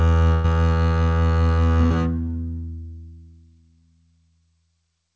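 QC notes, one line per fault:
0.34–0.46 s, burst of packet loss: the music freezes into a held, fading continuation of its last sound for about 100 ms, then jumps ahead with that stretch missing. Consecutive packets were lost, so the receiver stretched and attenuated the final audio until real data returned.
1.86–1.92 s, short concealed packet loss: a brief 40 ms smear or wobble in the music. Late packets missed the decoder, which extended the preceding sound, band-limited below 8 kHz like the rest of the G.722 path, then blended back into the real signal.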